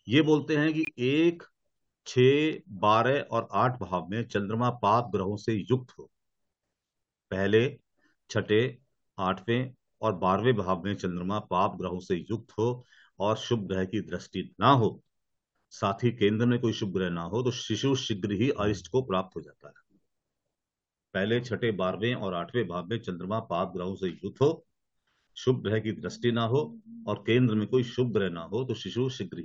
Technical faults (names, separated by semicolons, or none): corrupt frame muted; electrical switching spike